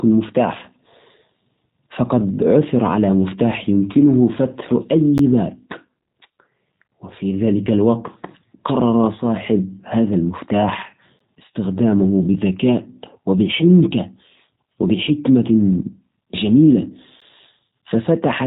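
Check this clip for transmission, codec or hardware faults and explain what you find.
Two faults are audible: G.729 coding across the whole clip and three brief chunk gaps.

The G.729 codec runs throughout at 8 kbit/s, rebuilding the speech from a filter, pitch predictor and sparse pulses. Nothing passes above about 3.8 kHz, and the rough, synthetic texture separates it from a plain low-pass filter.

A gap between chunks occurs at 5.18 s, just after "على مفتاح يمكنه فتح", and again at 11.19 s and 17.20 s. Each is a hard-edged 12 ms silence, spaced exactly 6 s apart, as the stream is played chunk by chunk. That strict regularity distinguishes it from random packet loss.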